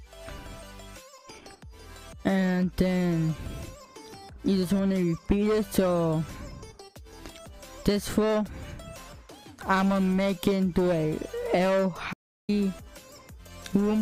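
Near the end of the audio, from 12.13 s to 12.49 s, there is an audio dropout to silence lasting about 350 ms. The signal cuts off abruptly mid-flow and resumes just as suddenly, and the gap holds silence with no room tone underneath. The likely cause is a brief loss of the input, such as a device disconnect, a link failure or an accidental mute, while the recorder continued writing silence, so that stretch of audio is unrecoverable.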